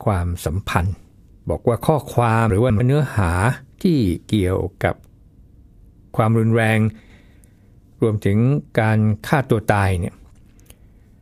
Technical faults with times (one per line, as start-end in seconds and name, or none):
2.50-2.80 chunks out of order
7.00-7.20 chunks out of order